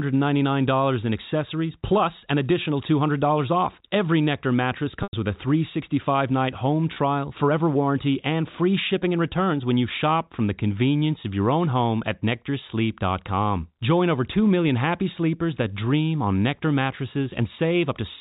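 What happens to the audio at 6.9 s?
Packets were dropped between 6.94 and 6.96 s, just after "night home". The receiver filled the 20 ms gap, which fits two 10 ms packets, by repeating the last pitch period. This packet loss with pitch repetition sounds like a brief, slightly buzzy hold before "forever warranty and free".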